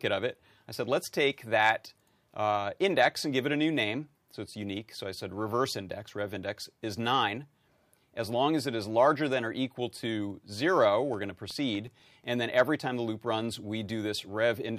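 From 11.02 to 12.48 s, just before "every time the loop", CD scratch ticks: thirteen brief clicks, about nine a second, the longest about 4 milliseconds, where a scratch exceeded error correction. They show as evenly spaced vertical lines on a spectrogram.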